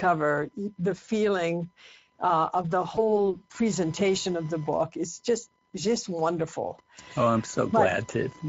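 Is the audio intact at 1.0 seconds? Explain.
No. VoIP packet loss concealed by the speech codec sets in just after, from 1.05 to 1.09 s. A single 20 ms frame went missing, and the decoder filled the gap by repeating its last pitch and filter at falling gain. The result is a brief stretched, fading sound, and the sound stays weakened as the decoder recovers.

Speex codec damage is present at 1.0 s and throughout. The coarse excitation coding, consistent with a bitrate near 17 kbps, makes the speech sound plainly hoarse and noisy, and the highs are a noise-like fill rather than real detail.

Computer activity noise also runs throughout. It is a faint buzz pulsing at around 1 kHz, about 30 dB below the speech, caused by machine load shifting the audio circuit's ground. It follows the computer's activity, not the speech.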